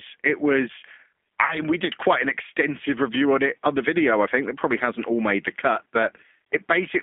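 Throughout the clip the speech has been squeezed through the G.729 codec. It rebuilds each stretch of speech from a vocal tract filter, a pitch predictor and a few pulses, and the result fits 8 kbit/s coding. The line passes roughly 250 Hz to 3.5 kHz, so the speech sounds thin and boxed in. The coding damage is plainly audible as a rough, slightly synthetic grain on the speech.

From 1.46 to 1.60 s there is VoIP packet loss concealed by the speech codec. About 40 ms of audio never arrived, which fits two 20 ms packets going missing. The decoder filled the gap by extending its last pitch and filter settings while turning the level down, so the sound smears into a fading buzzy tone or coloured noise. Because each frame depends on the previous one, the speech stays weakened and distorted until about 1.60 s, well after the missing audio itself.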